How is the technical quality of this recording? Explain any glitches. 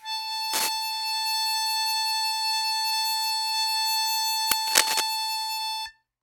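The music is marred by two kinds of glitch, clustered near the start and toward the end.

Cable scratch noise at 0.53 to 0.69 s and 4.67 to 5.01 s is dense, ragged rustling, likely from a worn contact whose resistance is jumping. It is roughly as loud as the music, then a little louder. On a spectrogram it shows as broadband speckled smears.

The uninitialised buffer at 4.52 s is a roughly 5 ms blast of leftover memory played as audio. It appears as a sharp spike with a bright vertical stripe.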